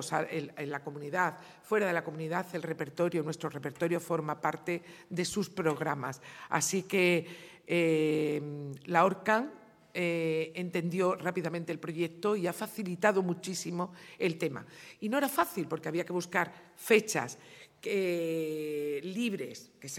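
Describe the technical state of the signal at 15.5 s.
An irregular burst of crackle and scratching runs from 15.42 to 15.52 s: loose connector crackle, a worn contact rapidly breaking and remaking, chopping the signal.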